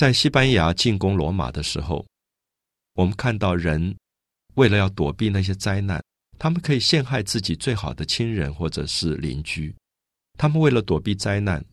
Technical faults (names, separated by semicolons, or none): none